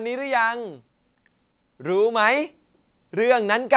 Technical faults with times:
none

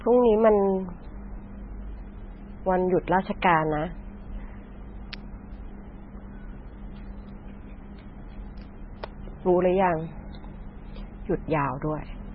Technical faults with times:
0.00-12.35 MP3 compression
5.13 electrical switching spike
9.04 electrical switching spike

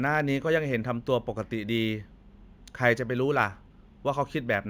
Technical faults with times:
0.00-4.69 imaging from linear upsampling

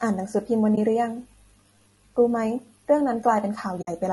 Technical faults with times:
0.00-4.13 low-delay AAC compression
0.75-0.78 AAC frame loss with muting
3.81-3.89 AAC frame loss with muting

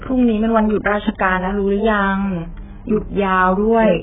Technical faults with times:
0.00-4.03 AAC compression

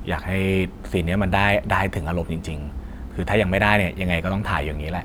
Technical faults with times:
none

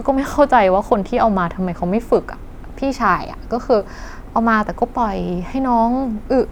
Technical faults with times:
none

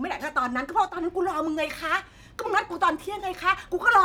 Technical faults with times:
0.89-0.97 one channel drops out

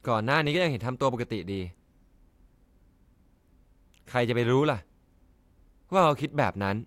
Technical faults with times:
none

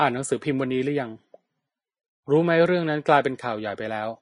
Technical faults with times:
0.00-4.21 Vorbis compression

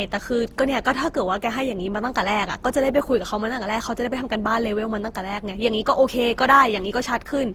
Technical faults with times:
0.00-7.54 generation loss

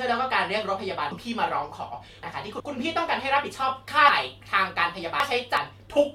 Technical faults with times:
1.11-2.60 chunks out of order
4.09-5.57 chunks out of order

